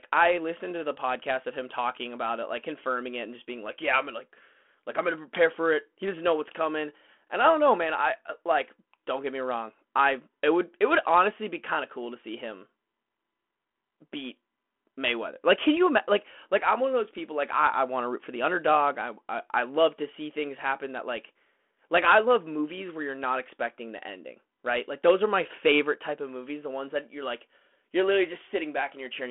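Nothing in this speech recording calls for attention, as there's no technical fault to point to anywhere in it.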